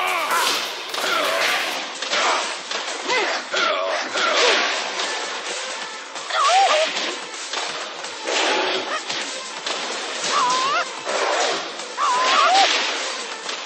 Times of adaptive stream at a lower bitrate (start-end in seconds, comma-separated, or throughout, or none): 1.74-13.65